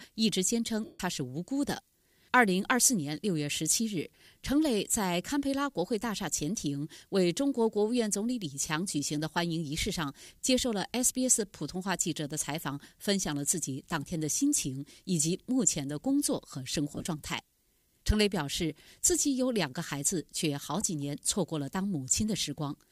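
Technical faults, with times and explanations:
0.84 to 1.00 s, lost LE Audio frames: a solid gap of about 150 ms, which fits a run of 7.5 ms LC3 frames going missing together. The decoder fills it by repeating the last good spectrum with randomised phase signs, so the sound smears into a noisy wash and then fades away as concealment gives up.
16.92 to 17.06 s, lost LE Audio frames: about 82 ms lost, scattered over 135 ms, with runs of around 20 ms at most. Each short run is patched before fading sets in, so this one sounds like brief rough, grainy flickers rather than a dropout.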